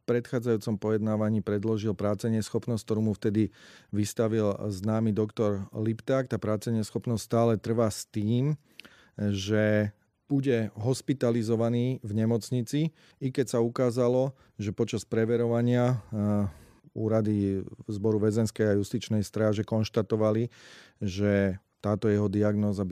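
Listening carefully to the speech, nothing stood out as a technical fault at any point.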